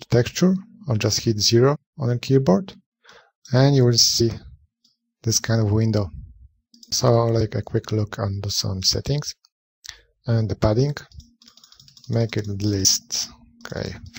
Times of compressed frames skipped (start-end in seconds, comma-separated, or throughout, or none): 1.74-1.76, 4.19, 12.84